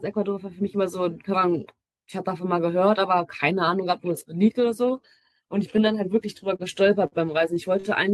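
Short stalls from late packets hit at 6.56, 7.07, 7.54 and 7.80 s. Each time the jitter buffer ran empty, so the speech is held 17 to 52 ms, then resumes with nothing lost.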